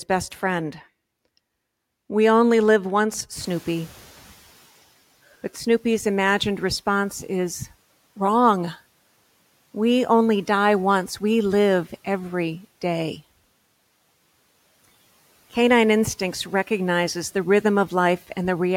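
At 3.4 s the room noise jumps by about 22 dB, around 3.5 s, and the noise suppressor catches up only slowly. For 1.19 s, until 4.59 s, its noise estimate lags, so the noise comes through with less reduction at first before sinking by about 7 dB as the estimate adapts. On a spectrogram the broadband noise floor brightens abruptly, then fades over that second. In the waveform the noise in the gaps between speech visibly shrinks; the risen room noise sits about 30 dB below the speech.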